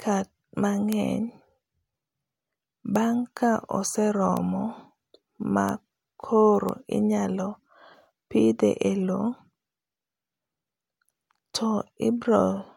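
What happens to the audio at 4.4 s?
At 4.37 s a single sample jumps out of line with the surrounding speech: a bit error spike. One flipped bit in a stored or transmitted sample value throws it by a power of two, here reaching about -10 dBFS, and the next sample returns to normal. Lasting only one sample, it carries energy across the whole spectrum and bears no relation to the signal, so it is heard as one isolated, sharp tick.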